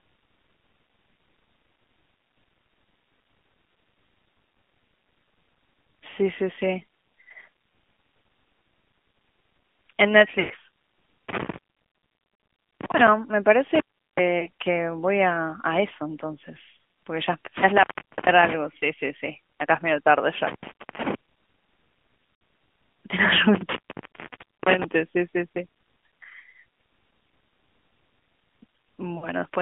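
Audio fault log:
throughout: AMR narrowband mobile codec. Everything sits in a narrow phone band, roughly 150 Hz to 3.4 kHz, with nothing up top, so the speech sounds boxy and clipped of its air. The codec rebuilds the voice from a vocal-tract model fed with sparse pulses. At the bitrate this sounds like, a mid-rate mode around 10 kbps, that gives a plainly audible buzzy, synthetic edge.
10.40–10.52, 14.40, 16.78, 22.24–22.40, 29.18–29.28: lost AMR speech frames. Frames failed to arrive intact, so the decoder kept replaying its last good pitch and vocal-tract settings at falling gain. The single short losses at 14.40 and 16.78 are brief dips or warbles. At 10.40 about 100 ms goes, so the sound smears out and fades before speech returns a bit weak. Around 22.24 the gaps are scattered over 160 ms, the longest 60 ms. At 29.18 about 40 ms drops.
11.29–13.08, 13.75–14.19, 17.57–18.53, 20.47–21.15, 23.55–24.84: intermittent contact. 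The signal just drops out, like a loose plug or cable opening up, with crackle at the edges and only faint hiss left while the line is open. The long ones are near 1.25 s in the first stretch and about 0.9 s at 23.55. The others run roughly 0.36 to 0.44 s. They cluster through the middle of the clip, which points to a connection worked loose rather than anything in the codec path.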